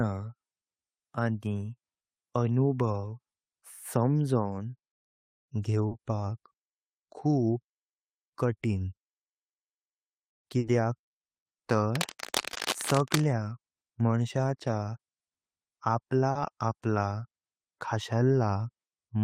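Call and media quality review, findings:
Brief smears and wobbles at 5.87–5.93 s, 10.59–10.65 s, 12.53–12.57 s and 16.31–16.37 s: short concealed packet loss. About 40 ms of late or missing audio at each (20 ms at 12.53 s) was bridged by extrapolating the preceding sound.

Scratchy, rustling bursts from 11.95 to 13.25 s, only a few dB below the speech: cable scratch noise, likely from a worn cable or connector shifting and changing contact resistance.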